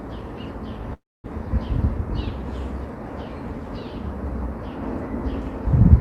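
At 0.93 s the sound stalls for about a third of a second, until 1.26 s, in a call audio freeze. Packets were likely held up and the jitter buffer ran dry, so the last sound smears briefly, then drops to silence before resuming where it left off, now running about 0.31 s later.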